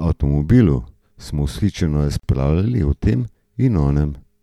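At 2.20 s, right after "avtomobilu smo vzhičeno", the speech drops out for about 39 ms, ending at 2.23 s: a gap at a join of encoded pieces. The audio was encoded in separate segments and spliced without trimming, so the encoder's start-up delay and the padded final frame both remain as silence. The cut-in and cut-out are softened by the codec, and the speech resumes exactly where it stopped.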